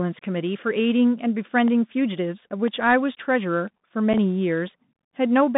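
Throughout, the speech carries Bluetooth CVSD headset codec damage. Content is confined to roughly 150 Hz to 3.7 kHz, which fits a 64 kbit/s CVSD link. The one-bit slope coder cannot track fast, loud transients, so sibilants turn scratchy and a granular hiss sits underneath.

From 1.18 s to 5.18 s, periodic USB or driver dropouts occur every 0.5 s, about ten in all. Each removes roughly a millisecond of audio and substitutes silence, consistent with a blocked bus or driver. They are heard as evenly spaced ticks over the speech.

At 4.13 s there is a single unconcealed Bluetooth headset packet loss. About 7.5 ms of audio, likely one packet, is lost with no concealment. The gap has abrupt edges, and the speech briefly drops out.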